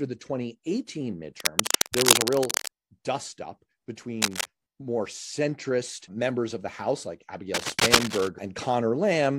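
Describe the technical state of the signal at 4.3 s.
At 4.3 s the speech is overlaid by cable scratch noise, running from 4.22 to 4.46 s. Dense, uneven bursts of scratching sit roughly as loud as the speech. A worn cable or connector being moved, its contact resistance jumping rapidly, is the likely cause.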